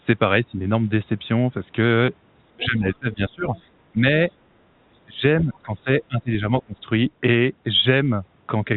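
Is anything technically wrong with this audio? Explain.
Yes. The speech has one brief dropout and, across its middle, repeated level dips and a faint second voice.

Packet loss with pitch repetition, 2.06 to 2.08 s. About 20 ms of audio went missing, roughly one packet's worth, and the receiver filled the hole by replaying the last pitch cycle. Because the gap is so short, the repeated cycle never has time to fade to silence. It comes across as a tiny held, buzzy blip before the speech picks up again.

Speech suppressed in double talk, at 2.56 to 3.47 s, 3.92 to 4.05 s, 5.05 to 5.23 s, 5.44 to 5.88 s and 6.08 to 6.8 s. The talker's level sinks, by around 20 dB at worst in the first, third and fifth stretches and about 15 dB in the others, sounding ducked and patchy. This is likely the echo canceller turning everything down while both parties spoke at once, because it could not tell the local voice from loudspeaker echo.

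Other side's voice leaking through, at 2.63 to 2.79 s, 3.06 to 3.17 s and 3.55 to 3.64 s. Short scraps of a second voice sit roughly 20 to 25 dB under the main speech. The likely cause is far-end audio from the talker's loudspeaker reaching the microphone and surviving echo cancellation. Each scrap is brief and faint beneath the talker.

The audio is also limited to telephone bandwidth, with nothing above 4 kHz, which fits ordinary G.711 coding working as designed.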